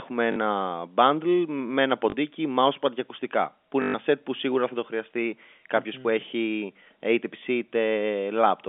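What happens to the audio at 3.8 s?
At 3.82 s the speech breaks into a short robotic stutter that lasts until 3.94 s. It is packet loss with the last packet repeated. About 120 ms of audio went missing, which fits six 20 ms packets. The receiver filled the gap by replaying the last good packet over and over. The repeats seldom line up with the pitch, and the run buzzes near 50 Hz, the packet rate.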